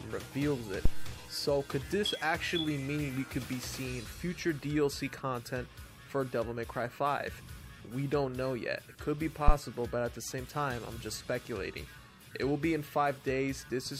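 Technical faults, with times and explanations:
0.85–1.20 s and 9.48–9.54 s, phantom power thump: a deep, low-frequency thump appears twice. This is the pattern of a supply voltage being switched on a live input, where the DC step passes through the coupling capacitors as a single low pulse. The first peaks at about -12 dBFS and dies away over roughly 77 ms. The second is shorter but louder, peaking at about -9 dBFS with a 12 ms decay.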